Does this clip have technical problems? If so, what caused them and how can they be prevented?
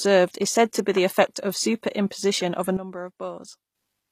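Yes. Throughout, the treble sounds synthetic, with plainly audible codec damage and nothing above 15 kHz. That's likely HE-AAC compression at a low bitrate, around 24 kbps, where the top end is rebuilt from copied lower bands instead of coded. Encoding at a higher bitrate, or with plain AAC, would keep the real treble.

From 2.77 to 3.75 s, the speech and the background drop together by about 12 dB and then come back, a sudden gain jump with no fade. This is likely a gain change applied instantly rather than ramped. Applying level changes with a short ramp would prevent it.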